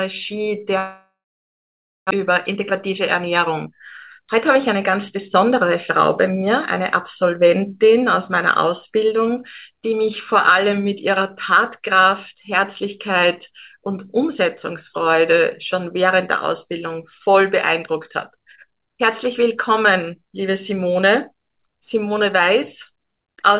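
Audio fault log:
0.78 to 2.13 s, long network dropout. The sound stops arriving and the last moment is stretched into a fading buzz for a few tenths of a second. Then roughly 0.9 s of near silence follows. When audio returns, about a second of material is simply gone. This is likely a network outage, with the receiver concealing the gap and then jumping ahead. The timing also appears to shift by around 0.3 s across the gap.
2.20 to 5.67 s and 6.21 to 6.80 s, jitter buffer speed-up. Playback runs fast, about 7% in the first stretch and about 6% in the second, while pitch stays the same. The receiver is trimming tiny pitch-period slices over and over to drain excess buffered delay. Roughly 0.2 s is removed in the first run and about 40 ms in the second. The result sounds hurried. Throughout, the call codec passes nothing above 4 kHz, which fits G.711 mu-law at 64 kbps.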